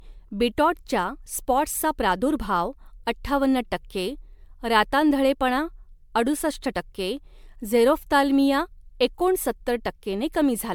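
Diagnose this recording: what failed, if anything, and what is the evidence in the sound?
The failure sits in the codec stage: generation loss runs through the whole speech recording. The sound is swirly and hollow throughout, with consonant attacks smeared, more degraded than a single MP3 pass at around 128 kbit/s would explain, and likely the result of roughly seven successive encode-decode cycles. Each pass requantises on a shifted frame grid, so errors compound. A spectrogram shows a brick-wall cutoff near 19.9 kHz, scattered spectral holes and blurred onsets.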